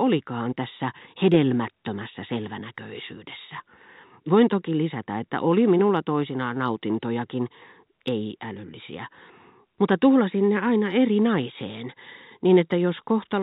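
No technical faults occur anywhere in the speech, which carries the narrow, telephone-band sound of G.711 A-law coding throughout.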